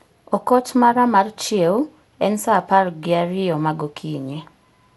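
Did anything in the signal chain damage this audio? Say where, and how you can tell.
Yes, the codec stage. Across the whole speech clip there's generation loss: swirly, hollow smearing, soft attacks, and nothing above 11.8 kHz. That sounds like an MP2-style encode at around 96 kbit/s, likely re-encoded about seven times, each pass adding its own noise and holes.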